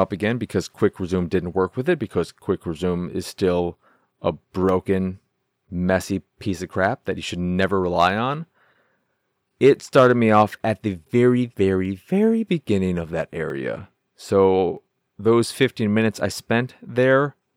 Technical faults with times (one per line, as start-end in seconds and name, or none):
4.69 dropped samples
10.91 dropped samples
11.85 dropped samples
13.50 dropped samples
14.77 dropped samples